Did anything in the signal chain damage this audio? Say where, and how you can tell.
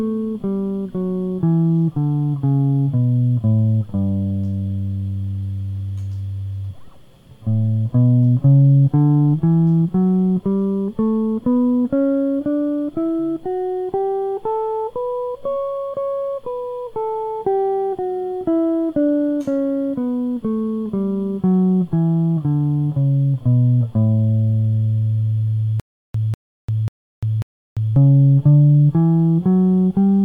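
Yes, there's a stutter with silent gaps in the music from 25.80 to 27.96 s. The same 195 ms burst plays four times, each followed by about 346 ms of dead digital silence, so it repeats every 541 ms. The cause is likely a playback or streaming buffer stall, where each retry replays the last fragment it had and then runs dry. Whatever should have played in those gaps is gone.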